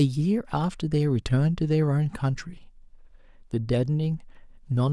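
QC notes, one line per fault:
No faults found.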